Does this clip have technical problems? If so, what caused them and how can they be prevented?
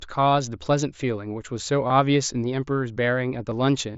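Yes. Concealed Bluetooth headset packet loss occurs at 1.87 to 1.90 s and at 3.51 s. Packets between headset and phone were lost, and the phone filled each gap by repeating a matching slice of the preceding waveform. This leaves a brief buzzy hold across the 30 ms gap, while the 7.5 ms gap is nearly hidden. To prevent it, keep the headset close to the phone with a clear line of sight and away from busy 2.4 GHz sources such as Wi-Fi routers.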